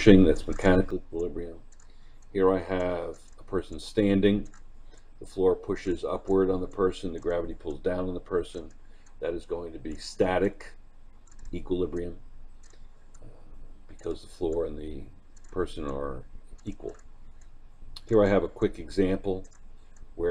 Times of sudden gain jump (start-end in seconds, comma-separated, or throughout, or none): 0.91-20.31